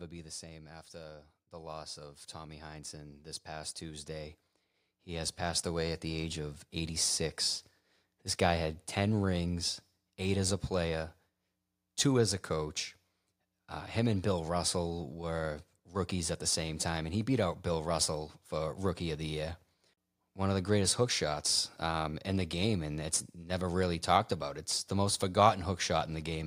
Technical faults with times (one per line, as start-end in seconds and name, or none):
0.05-0.84 automatic gain falling
0.91-8.39 automatic gain rising